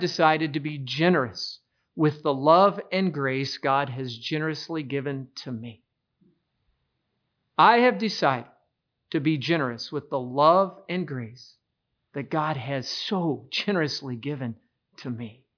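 Speech recording with no audible technical faults.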